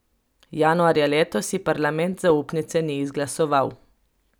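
At 2.3 s, just after "ji parlament", a corrupt FLAC frame decodes from wrong predictor values, giving a short error peaking around -16 dBFS, seen as a thin broadband spike.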